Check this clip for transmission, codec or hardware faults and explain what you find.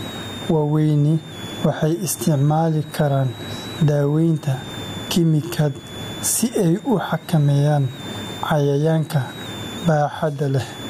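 Two hardware faults run through the whole speech clip.

A switching supply whistle sits throughout, a faint high tone wandering between 3.4 and 3.9 kHz, seen as a thin drifting line on a spectrogram.

Gain pumping also runs throughout. The gain swings by roughly 20 dB, leaving loud and soft parts closer in level and the sound squashed, likely from overdriven input gain triggering a fast limiter. The waveform looks flattened and breathing.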